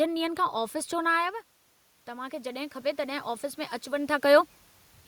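A short speech recording where, between 2.05 and 3.34 s, you can hear automatic gain rising: the input dropped by about 9 dB, so the AGC eased its gain up by about 6 dB, and the voice and room noise swell together. The level shifts around 1 s and 4 s are just the talker moving.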